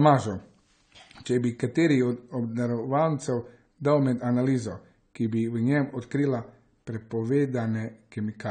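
Throughout, the speech sounds dull and smeared with a warbling, fizzy texture and nothing above 9 kHz, likely AAC compression at around 32 kbps rather than a simple low-pass filter.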